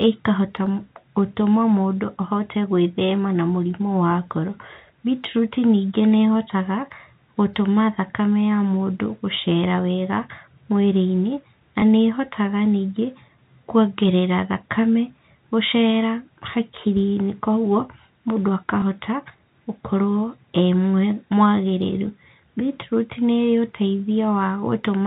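Packet loss with last packet repeated strikes this telephone-band speech recording at 11.8 s and again at 18.8 s. Each time, one 20 ms packet goes missing and the receiver replays the previous one, leaving a small blip.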